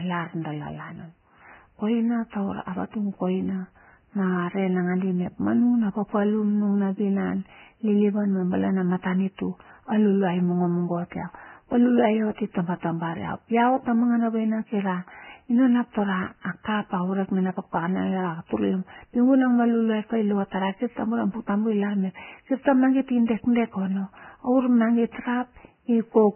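Right through the clip the speech is hissy and grainy with nothing above 3 kHz, likely heavy Vorbis compression turning treble detail into noise.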